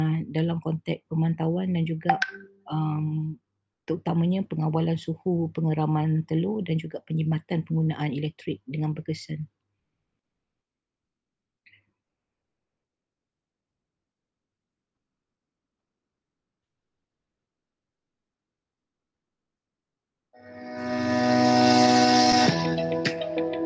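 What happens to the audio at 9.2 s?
Nothing goes wrong at 9.2 s; the audio is intact there, with no dropout, click, distortion or other fault audible at that moment.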